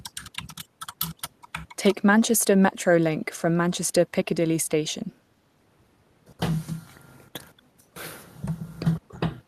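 Speech suppressed in double talk at 2.46–2.54, 2.96–4.15 and 4.46–4.67 s: the speech drops in chunks by up to about 35 dB, likely an echo canceller ducking overlapping talk.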